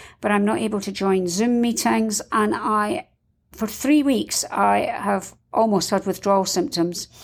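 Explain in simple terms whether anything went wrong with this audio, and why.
Nothing went wrong with this audio, because nothing in the recording breaks or gets in the way of the speech.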